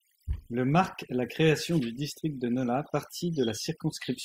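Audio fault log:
throughout, overdone noise removal: a noise reduction stage set far too aggressively clamps individual frequency bands down whenever their level sits near its noise estimate, so the background noise drops but so do the softer parts of the speech. The pauses fall to near silence dotted with twinkling specks. A spectrogram shows a black background sprinkled with isolated bright dots, with ragged, hollowed-out harmonics.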